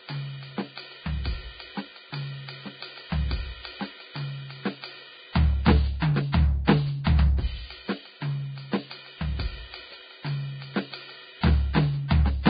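From the start, the music is dull and grainy. Nothing sounds above about 4.9 kHz. The upper range is hissy and rough, and tones lose their clean edges. This is likely Vorbis compression at heavy damage, which fits a very low bitrate near 16 kbps.

At 7.04 to 7.07 s, a short hiss comes just before a sharp attack. It lasts about 25 ms. This is pre-echo. The codec spread its noise across a whole block, so noise meant for the loud attack filled the quiet moment before it. The attack sounds smeared.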